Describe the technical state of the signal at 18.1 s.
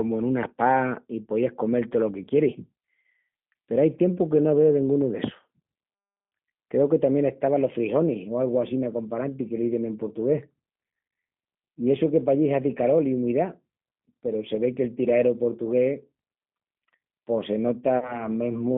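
At 18.1 s the sound falls inside a stretch of VoIP packet loss concealed by the speech codec, running from 17.99 to 18.28 s, right after "pos se". A single packet, about 30 ms of sound, went missing, and the decoder filled the gap by repeating its last pitch and filter settings at falling gain. It comes out as a brief stretched sound, a buzzy tone or coloured noise, that fades, and the voice stays thin until roughly 18.28 s while the predictor recovers. On a spectrogram the stretched sound holds static and dims. The waveform shows a shrinking, repetitive pattern instead of natural variation.

The G.729 codec, running at 8 kbit/s, also shapes this moment. It passes only about 150 Hz to 3.5 kHz, so the spectrogram shows nothing above that band. Its frame-by-frame pulse model adds a plainly audible rough, synthetic grain to the sound.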